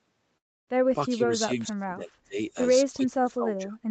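Speech in a call recording, with a gap near the start and two later stretches where the voice sinks away. From 0.37 to 0.70 s the sound smears into a fading buzz and then drops to silence, and the speech resumes with part of it missing. This is a long network dropout, likely from packets failing to arrive, so the receiver stretched the last audio it had until that concealment gave out and left only silence. From 1.09 to 2.39 s and again from 2.92 to 3.78 s, the voice dips deeply, by as much as about 35 dB. This is speech suppressed in double talk. The likely cause is that both ends were talking at once and the echo canceller, unable to tell this talker from the far-end echo, turned everything down. Throughout, the audio has nothing above 8 kHz, which fits a call codec running at that bandwidth.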